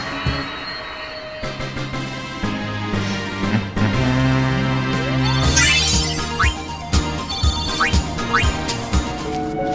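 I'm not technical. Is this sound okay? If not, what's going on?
Yes, nothing in this recording points to a technical problem, so there's nothing to fix.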